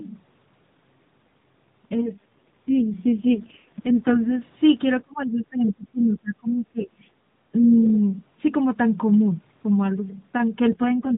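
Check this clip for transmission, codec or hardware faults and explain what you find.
Three kinds of fault are audible in this speech, carried over a narrowband mobile link whose 4 kHz ceiling and light codec texture are present throughout.

AMR rate drop, 1.96 to 4.42 s and again 10.72 to 11.16 s: the voice turns rough, buzzy and synthetic, with no gap and no change in bandwidth. This fits the network pushing AMR-NB down from 12.2 to about 4.75 kbps on a weak radio link, leaving too few bits to model the voice well.

Speech suppressed in double talk, 5.02 to 7.01 s: the talker's level sags and breaks up in patches, totalling roughly a second and a half and dipping by about 25 dB at worst. The likely cause is the echo canceller, confused by both parties speaking at once, turning down the near voice along with the echo.

Other side's voice leaking through, 7.85 to 7.9 s: a brief fragment of a second voice, about 20 dB below the talker, slips in. 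This is likely far-end loudspeaker sound that the echo canceller failed to strip from the microphone.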